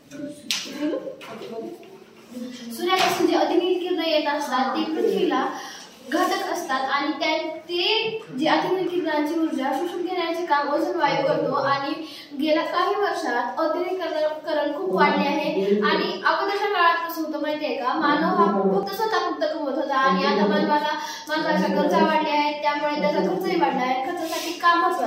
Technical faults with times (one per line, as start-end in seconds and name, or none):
8.88 audio missing between chunks
18.83 audio missing between chunks